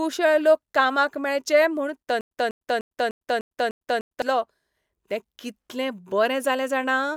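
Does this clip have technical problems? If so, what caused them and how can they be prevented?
Yes. After "लोक कामाक मेळचे म्हूण", a stutter with silent gaps runs from 2.21 to 4.22 s: a 198 ms burst repeats seven times, every 300 ms, separated by 103 ms of digital silence. The likely cause is a stalled stream replaying its last fragment on each retry. Larger playback buffering and a more stable network connection would prevent it.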